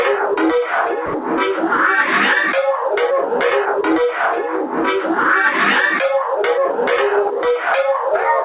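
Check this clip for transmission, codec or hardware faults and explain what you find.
One fault is audible. From 1.06 to 1.14 s, about 80 ms of the sound gives way to steady low-level noise, and roughly 70 ms of the original sound is lost before it resumes. This is likely sound dropped by the voice detector: the sender judged the sound to be background and stopped transmitting, so the receiver filled the gap with comfort noise until the detector triggered again. The call path's band limit is also audible, with nothing above 4 kHz, which fits a G.711 A-law link at 64 kbps.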